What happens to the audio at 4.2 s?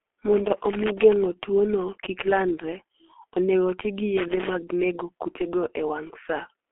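A loose connector crackle runs from 4.17 to 4.49 s. A worn contact makes and breaks rapidly, chopping the signal and adding pops from any DC on the line. It sounds like an irregular scratchy burst. On a waveform it shows as jagged spikes and dropouts, and on a spectrogram as broadband vertical streaks.

Underneath, as across the whole clip, is heavy G.723.1 codec damage. The long 30 ms frames and slow voice model blur consonants and leave the speech muffled and hoarse, which fits a bitrate near 6 kbit/s. A spectrogram shows a hard ceiling with nothing above 3.8 kHz and smeared, blocky detail.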